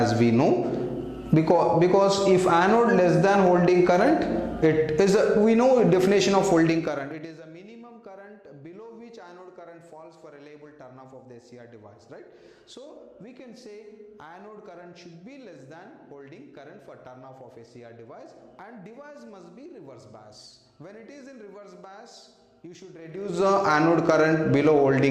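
From 6.62 to 7.44 s a rapid ticking rides on the sound as it falls by about 25 dB, and again from 23.00 to 23.49 s, faster, as it rises by about 25 dB. This is zipper noise: the level moves in unsmoothed 2 dB jumps, each leaving a small click.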